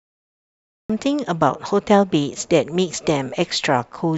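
It's a speech clip with a cut-off start: there's digital silence until about 0.90 s, then the speech jumps in mid-sound with no natural attack or fade-in. The recording or stream evidently began late, so the first part of that sound is simply missing.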